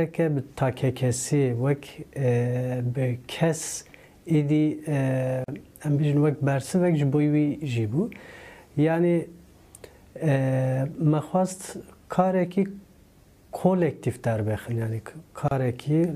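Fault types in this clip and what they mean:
Gap at a join of encoded pieces: the audio was encoded in separate chunks and butted together untrimmed, so encoder delay and end padding leave short holes, about 40 ms at 5.44 s and 31 ms at 15.48 s, ten seconds apart, with smeared edges before the sound picks up again.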